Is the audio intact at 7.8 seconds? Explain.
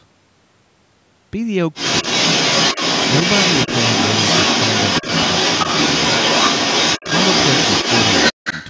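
No. From 1.74 s to 8.67 s, a second voice runs under the talker, at about the talker's own level or a little louder. This is the other side's voice leaking through, likely the far end's loudspeaker playback that the echo canceller failed to remove.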